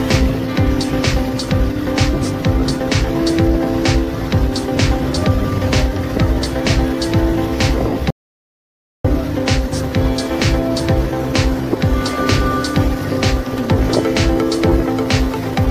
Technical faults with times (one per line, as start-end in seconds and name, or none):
8.10-9.04 audio dropout to silence